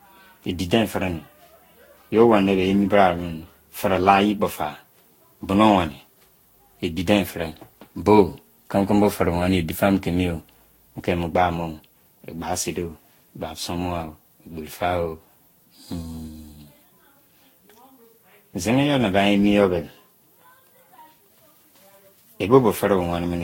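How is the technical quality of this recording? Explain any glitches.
The recording is degraded throughout by generation loss, present from start to end rather than in isolated glitches. The speech sounds swirly, hollow and smeared, consonant attacks are blurred, and there is nothing above 16.7 kHz. This is likely the result of repeated lossy re-encoding, around seven passes, with a character that points to Vorbis at roughly 62 to 65 kbit/s. Each pass quantises on a fresh frame grid, so noise and spectral holes accumulate. The clue that separates this from a single low-bitrate encode is that the smearing is heavier than one pass at that rate would produce.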